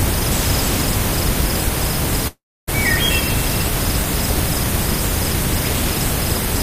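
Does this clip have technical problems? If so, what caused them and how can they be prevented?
Yes. From 2.27 to 2.69 s the sound drops out for about 0.4 s. The last sound is stretched into a fading buzz, then about 0.28 s of silence follows. Audio resumes with that stretch missing. A long network dropout is the likely cause. A larger jitter buffer or a more stable connection would prevent it.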